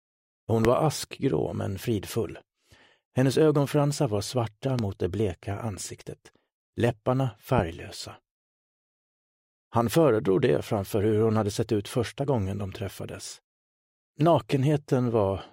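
A loud pop hits at 0.65 to 0.67 s, about 20 dB above the sound. Two more follow at 4.79 to 4.81 s and 7.59 to 7.61 s, about 15 dB up. Each is one sharp thump over the continuing audio, likely from a sudden voltage spike.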